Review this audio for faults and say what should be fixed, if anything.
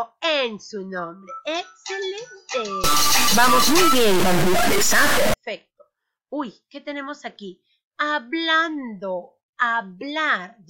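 From 2.84 to 5.34 s the sound turns harsh and buzzy, with noise even in quiet stretches. This is likely a stuck bit, with the wrong bit weight adding an error of roughly -15 dBFS to about half the samples. Unlike clipping, the distortion doesn't depend on loudness. The error follows the waveform's sign, so pauses fill with noise too. Checking converter wiring and data lines, with a bit-activity test, would prevent it.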